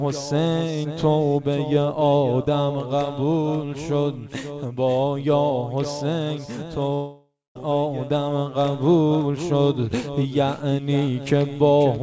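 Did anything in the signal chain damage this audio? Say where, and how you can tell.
Yes, the network: from 6.94 to 7.57 s the sound decays into a fading buzz, then silence, and resumes with that stretch missing, likely a long network dropout.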